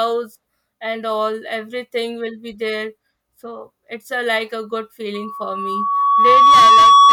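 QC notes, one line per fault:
5.14–7.12 s, loudspeaker feedback squeal: a steady 1.1 kHz tone rises over about a second and a half to roughly 15 dB above the speech and holds to the end. The microphone is picking up its own loudspeaker, and loop gain exceeds unity at that frequency.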